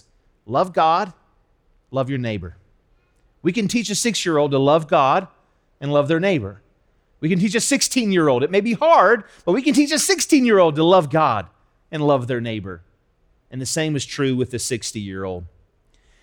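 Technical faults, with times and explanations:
No technical faults detected.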